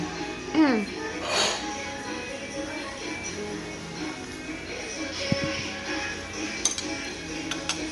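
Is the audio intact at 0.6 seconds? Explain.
No. At 0.6 s the signal is running through a lossy transform codec that likely matches Bluetooth LC3 compression, and this holds for the entire clip. Each 10 ms block is coded with too few bits, consistent with a rate near 48 kbps. Weak spectral detail is discarded and replaced with noise fill. The result is a plainly audible grainy, breathy texture, and nothing is present above 11.6 kHz.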